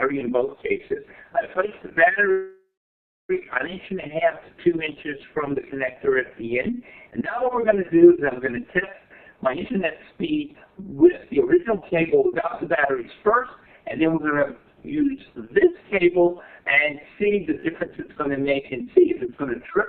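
From 2.31 s to 3.31 s there is a call audio freeze. The sound stops moving forward, and the last moment is held as a buzz or hiss that fades, leaving about 640 ms of silence before the audio resumes exactly where it left off. Packets were likely delayed in transit until the jitter buffer ran dry. About 979 ms was filled this way, so the delay grows by that much while nothing is skipped. On a spectrogram the final spectral frame smears sideways and decays into a blank band, and the waveform tapers into a flat stretch.

Between 9.96 s and 10.44 s a jitter buffer speed-up makes the audio run at about 111% speed with its pitch unchanged, so it sounds hurried. The buffer had built up more than its target. To shed around 70 ms of the excess, the receiver cut out many short pitch-period-sized pieces in quick succession. A spectrogram shows harmonics at their normal heights but with events packed closer together in time. 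The waveform looks compressed along the time axis, with periodic cycles quietly dropped.

At 17.60 to 17.65 s comes a short stall from a late packet. One packet missed its playout time, so the receiver stretched the preceding sound by 28 ms until the packet arrived, then continued from the same point. Nothing is lost, but a sound lingers too long, heard as a buzz or a dip. On a spectrogram this appears as a brief horizontal smear of the previous frame. In the waveform it shows as a few repeated-looking cycles.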